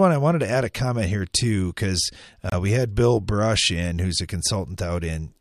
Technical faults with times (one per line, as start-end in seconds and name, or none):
2.50-2.54 corrupt frame muted